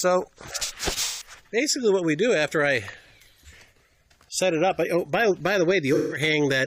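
AAC frame loss with concealment occurs at 1.03–1.31 s and 5.94–6.22 s. About 170 ms of data goes missing each time, which fits four lost frames. The decoder rebuilds the gap from the previous spectrum, leaving a smeared, noisy patch.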